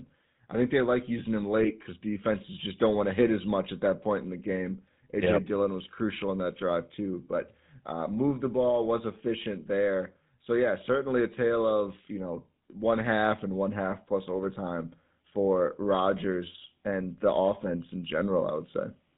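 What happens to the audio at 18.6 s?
GSM full-rate codec coding is present at 18.6 s, as it is throughout the clip. The codec rebuilds speech from a vocal-tract model driven by a sparse, regular pulse excitation and passes nothing above 4 kHz, so here the speech sounds buzzy, gravelly and muffled, damage consistent with a 13 kbps full-rate stream.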